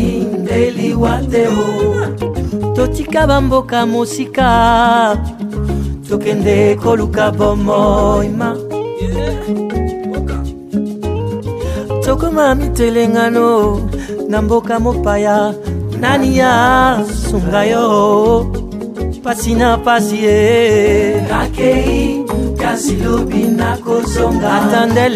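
No technical faults can be heard anywhere in the clip.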